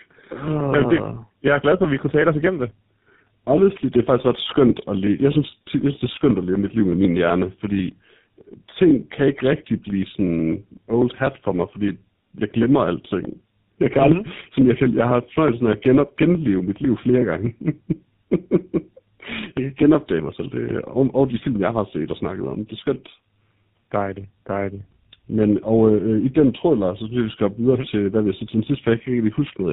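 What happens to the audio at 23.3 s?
Tandem speech coding affects 23.3 s, as it does the whole clip. The speech sounds passed through two low-rate speech codecs in a row, likely AMR-NB and then GSM full rate. Each re-encodes the previous one's damage. The result is rough, muffled and warbly, with nothing above 3.8 kHz.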